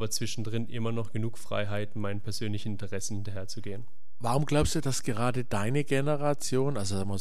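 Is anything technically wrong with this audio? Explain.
Yes. Throughout the speech there is a DC offset of about -29 dBFS: a constant added to every sample shifts the whole waveform off the zero line, eating headroom without being audible itself. The waveform sits visibly off-centre, and a spectrogram shows a steady band at 0 Hz.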